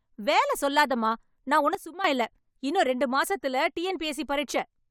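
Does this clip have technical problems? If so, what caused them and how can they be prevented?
Yes. From 1.75 to 2.04 s, just after "வேல சொல்லாதமா நான்", the speech and background noise drop together by about 12 dB, then return before "இல்ல இன்னும் ரெண்டு மாசத்துல". This sudden gain jump is likely a digital gain change applied instantly between samples. Ramping any gain change over a few milliseconds prevents it.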